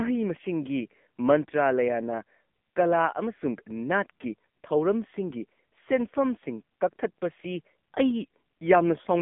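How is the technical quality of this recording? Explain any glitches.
Quality is poor throughout, because the speech has passed through an AMR narrowband mobile codec at a low bitrate. From start to finish, the codec rebuilds the voice from a coarse vocal-tract model with very few excitation pulses, consistent with a 6.7 kbps AMR-NB mode. Everything above 3.6 kHz is gone, leaving a 200 Hz to 3.5 kHz phone band, and the voice sounds heavily buzzy and synthetic.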